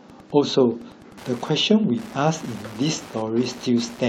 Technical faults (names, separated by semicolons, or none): Wi-Fi interference